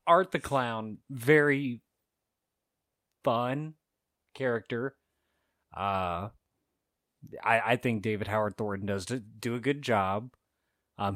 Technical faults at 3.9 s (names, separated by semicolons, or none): none